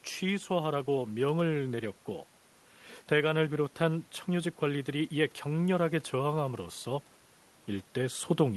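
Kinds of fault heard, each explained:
No technical faults can be heard in this speech clip. A low background of room noise sits about 32 dB below the speech, belonging to the recording space and not to the system.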